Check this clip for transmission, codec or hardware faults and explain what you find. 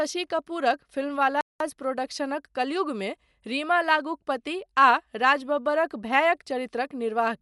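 Two faults here, one lasting the whole clip and one brief dropout.

Throughout the speech there's plainly audible codec damage that's likely Dolby Digital compression. Nothing comes through above 11.5 kHz, so it sounds dull, with a rough, fluttery noise around tonal parts where starved frequency lines get filled with noise. That fits a low bitrate of around 64 kbps.

From 1.41 to 1.60 s the audio just cuts to silence for about 0.19 s, then carries on. That's a playback stall, likely from the player running short of data or getting blocked, so output drops out mid-flow until it recovers.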